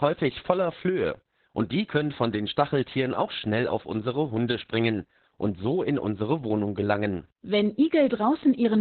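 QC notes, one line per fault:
throughout Opus voice compression: the speech is muffled, hoarse and slightly robotic, with the band squeezed down to narrowband. That points to SILK linear-prediction coding at a rate that fits about 8 kbps, in 20 ms frames. The coder keeps the vocal-tract shape but codes the excitation so coarsely that breathiness turns to rasp. The damage is steady and spread across the whole clip, which sets it apart from dropouts.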